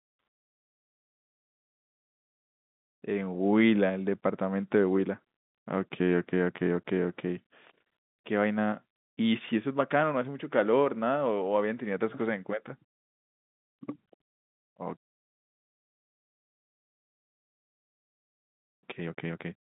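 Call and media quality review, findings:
Nothing stood out on listening to the speech, which comes over a G.711 telephone line with its usual band limit near 3.8 kHz.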